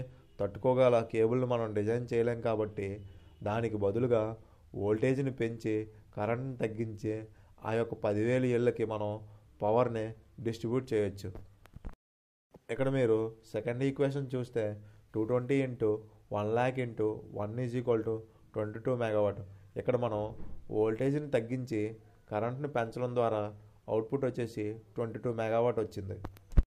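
At 11.74 to 11.78 s, a chunks out of order fault: one 20 ms block of audio reached the output one slot late, so it plays after the block that should have followed it. No audio is missing, but the two blocks are swapped, leaving three abrupt joins within 40 ms where the waveform jumps instead of continuing. The result is a brief jumbled stutter.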